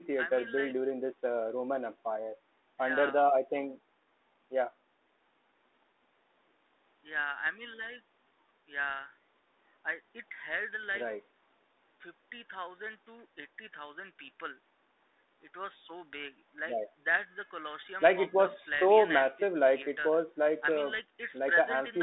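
Nothing stood out on listening to this speech, which comes through the narrow telephone band of the call path.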